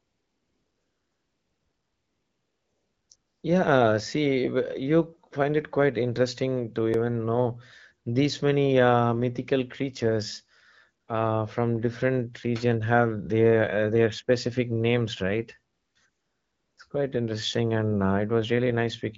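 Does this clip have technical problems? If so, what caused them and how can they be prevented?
Yes. AMR comfort noise fills 0 to 3.09 s, 3.15 to 3.43 s, 11.03 to 11.07 s just before "uh from different region", 15.73 to 15.95 s after "their specific names right", and 16.09 to 16.77 s. The phone decided nobody was talking, stopped sending speech frames, and the far end substituted smooth synthetic hiss for the real background. You can prevent it by turning off discontinuous transmission or making the voice activity detection less aggressive.

A repeated buffer hits at 6.94 s, between "it quite interesting to" and "know these many uh". A tiny chunk, which fits a 128-sample buffer, plays twice more, giving a click or brief buzz and dropping about 5 ms. You can prevent it by giving the audio thread more headroom or using a larger buffer. The AMR-WB HD Voice coding at 12.65 kbit/s can still be heard as slight coloration.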